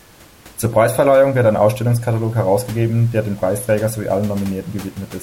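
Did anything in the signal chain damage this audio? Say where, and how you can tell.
No, nothing in the signal chain damaged this audio; the only thing beyond the speech is the room's own background noise, sitting about 25 dB below it.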